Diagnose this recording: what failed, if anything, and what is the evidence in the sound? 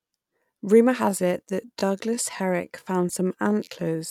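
From 1.01 s to the end, the speech suddenly drops to 0.71 times its pace while the pitch holds steady, and it drags. That's a time-stretched section, likely software lengthening the audio by repeating short slices, probably at the storage or editing stage.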